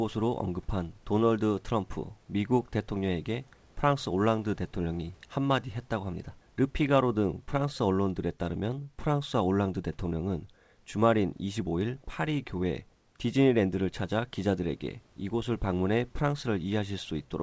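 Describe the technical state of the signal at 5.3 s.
At 5.3 s the speech signal is intact, carried cleanly through the WebRTC call path with its G.722 band limit at 8 kHz and the room noise sitting about 38 dB below the speech.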